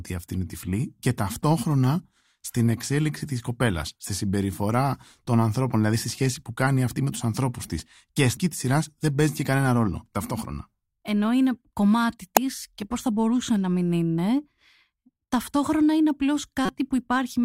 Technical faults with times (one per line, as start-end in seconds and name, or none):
8.37 damaged data in a compressed stream
12.37 damaged data in a compressed stream
16.65-16.69 damaged data in a compressed stream